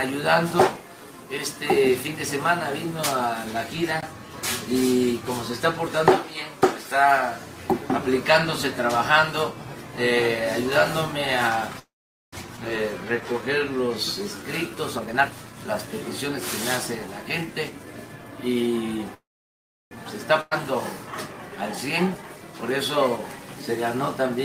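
Packets were likely held up in transit until the jitter buffer ran dry, producing two call audio freezes. From 11.79 to 12.35 s the last sound is stretched into a fading fill of about 0.53 s that is silent for most of it. From 19.14 to 19.93 s a similar fill lasts about 0.77 s, with roughly 0.69 s of silence. Both times the audio picks up exactly where it stopped, with nothing lost. At 12.57 s a skip ahead occurs: with later audio already queued, a stretch of around a third of a second was dropped, so playback jumps forward almost seamlessly, joining the two sides nearly directly. From 12.98 to 14.76 s a jitter buffer slow-down rebuilds the reserve by repeating tiny pitch-period pieces, adding 144 ms. The audio runs at 92% speed at unchanged pitch, sounding slightly drawn out. Two jitter buffer speed-ups then trim excess delay by cutting short pitch-period slices. From 14.95 to 16.28 s the audio plays at 122% speed with around 0.3 s removed, sounding noticeably hurried. 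From 17.07 to 17.94 s it plays at 107% with around 70 ms removed, a milder rush. Finally, a burst of packet loss at 20.41 to 20.53 s leaves 101 ms of concealment that carries the last sound forward without falling silent. Playback then resumes about 280 ms further on, with that stretch missing.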